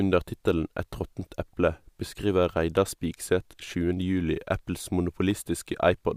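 No technical faults are audible.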